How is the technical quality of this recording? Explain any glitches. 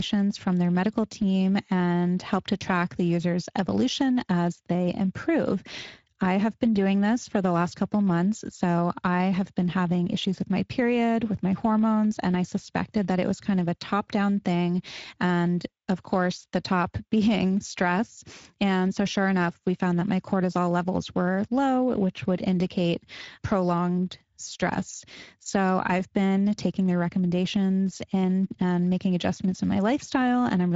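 The technical quality is compromised throughout by Speex codec damage, which is plainly audible across the whole speech recording.

Speex codec, throughout: the low bitrate, apparently around 17 kbps, leaves too few bits for CELP excitation, so speech sounds hoarse and grainy. Nothing lies above 7.7 kHz, and the upper band is noise-like fill. That hoarse, noisy texture, rather than a transform codec's warbling swirl, marks it as Speex.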